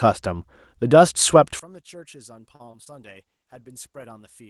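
Speech recording with three overlapping faults. From 1.59 s onward the level falls by about 26 dB and centred speech nearly vanishes, leaving a faint residue. This points to one channel inverted, most likely cancelling in a mono sum. On a waveform the envelope collapses abruptly, and a spectrogram shows energy fading across the whole band. Between 2.55 and 2.91 s, repeated packet loss gives a choppy, robotic texture. Four holes, the longest 41 ms, are each patched by stretching the last sound, so about 29% of that stretch is concealed. A spectrogram shows smeared, repeated frames and brief breaks rather than clean onsets. From 3.02 to 4.13 s a call bitrate drop makes the sound rougher and duller, consistent with the encoder falling from 32 to 16 kbps for about a second. On a spectrogram the upper band thins out and shows blocky, coarse detail.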